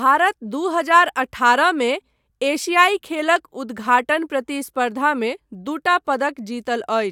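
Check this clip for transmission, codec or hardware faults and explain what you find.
Listening through this speech recording, no faults turn up. There is nothing to report at any point in it.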